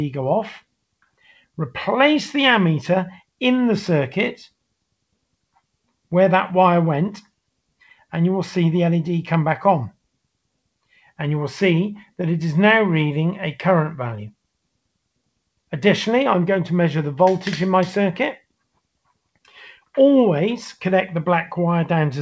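Twice, at 0.83–1.58 s and again at 18.75–19.54 s, the sound gets cut by the noise suppressor, which mistakes it for noise and ducks parts of it by about 21 and 22 dB, so quieter, sustained bits sink away or end abruptly.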